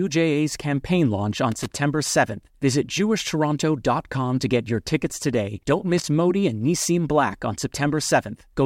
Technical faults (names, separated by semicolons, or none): loose connector crackle